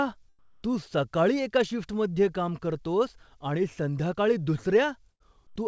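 A speech recording carried over a call link, with audio reaching no higher than 8 kHz, which fits a wideband codec such as G.722. From 0.39 to 0.63 s, a 240 ms stretch of the quiet background, sitting about 39 dB below the loudest speech, turns into a smooth, detail-free hiss about 4 dB quieter. This is likely comfort noise in place of the background: the sender stopped transmitting during the pause, and the receiver synthesised noise loosely matched to the room. At 5.11 to 5.23 s, the sound holds and fades for about 87 ms, then jumps ahead with roughly 90 ms of audio gone. This is a burst of packet loss, where the receiver stretched the last received sound to cover the missing packets, then resumed playback later in the stream.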